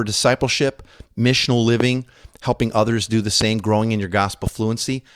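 Sharp single pops jump out over the speech at 1.80–1.83 s, 3.41–3.44 s and 4.47–4.50 s, the first two about 15 dB above it and the last a little softer. These loud pops are likely brief voltage pulses, from a switch or static, entering the signal path.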